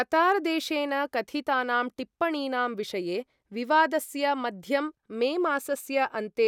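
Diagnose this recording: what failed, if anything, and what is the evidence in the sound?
Nothing failed in this recording, and the sound carries no evidence of a fault at any stage.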